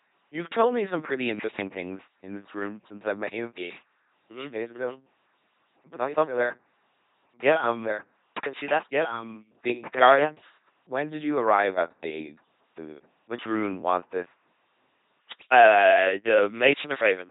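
Throughout, the speech has the buzzing, mechanical robot quality of an LPC-10 vocoder, which fits a 2.4 kbit/s stream. Each moment is rebuilt from a pulse train or noise through a short vocal tract filter, so wrong voicing choices give buzzes or hiss. A spectrogram shows heavy damage, evenly spaced pulse harmonics, and nothing above 3.8 kHz.

From 6.08 s to 10.32 s a doubled audio track appears, likely from a second, slower capture path. A dry, full-band copy trails by about one and a half seconds, roughly 5 dB quieter, with no decay. It starts and stops abruptly, and the waveform shows a shifted duplicate riding underneath.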